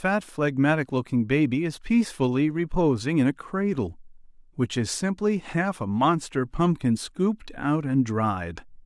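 No faults turn up anywhere in the speech recording: no dropouts, clicks, clipping, level jumps or timing breaks at any point.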